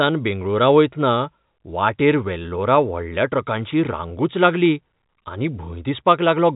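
Nothing stood out on listening to this telephone-band speech, which carries the narrow 4 kHz ceiling of ordinary G.711 line coding.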